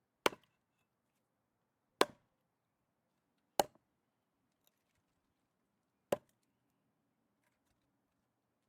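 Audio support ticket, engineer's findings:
No fault found in the audio. Nothing to escalate on this ticket.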